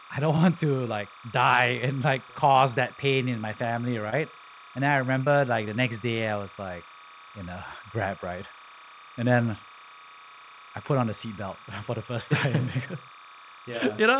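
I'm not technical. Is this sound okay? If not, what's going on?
No. Two things are wrong. First, timecode bleed runs through the whole clip. A steady chirping warble sits fairly quietly behind the speech. It flips between two pitches, near 1 kHz and 2 kHz. This is a timing signal leaking in from a nearby cable or track.

Second, there is short concealed packet loss, three times. Each time, about 20 milliseconds of the call never arrived. The receiver patched each gap by stretching the last sound. You hear a tiny smear or wobble at 2.52 s, right after "like die and like". It happens again at 4.1 s, after "pain in my family", and at 5.24 s, just before "like the next day".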